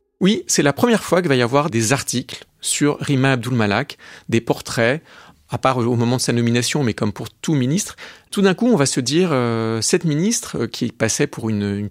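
Nothing in the speech here stands out as a technical fault, so there's nothing to flag from beginning to end.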